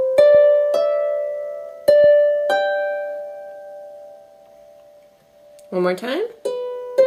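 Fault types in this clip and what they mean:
No faults are present in this clip.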